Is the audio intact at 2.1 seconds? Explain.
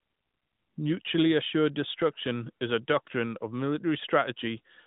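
Yes, the audio is intact at 2.1 seconds, with no fault at that moment beyond the narrow, telephone-like band of the AMR narrowband mobile codec it passes through.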